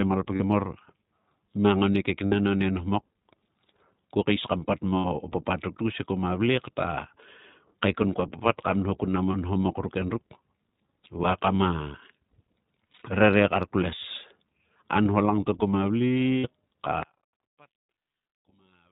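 Throughout, the speech sounds band-limited and slightly rough and synthetic, with nothing above 4 kHz. This is plainly audible iLBC codec damage, consistent with the 15.2 kbps mode and its 20 ms frames.

Brief held, buzzy vowel-like fills interrupt the audio at 0.36 to 0.41 s (40 ms), at 2.26 to 2.34 s (60 ms, between "mang oni" and "oni nhomok"), at 4.98 to 5.06 s (60 ms, after "ko keis kam pat" and before "papat ruk tkus he"), at 9.32 to 9.35 s (20 ms, after "nho kun nam o" and before "o nhomok ruk endruk"), at 12.92 to 13.02 s, and at 16.38 to 16.49 s (60 ms). The stretch at 12.92 to 13.02 s is 100 ms of gaps scattered over about 160 ms, none much longer than 40 ms. These are lost iLBC frames. The decoder repeated the last pitch cycle with noise, and because each frame stands alone, clean speech resumes almost immediately.

From 17.03 s to the end, the voice nearly disappears, dropping about 29 dB to a faint remnant. 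This is likely one channel inverted, so the centred speech cancels when the channels are summed to mono.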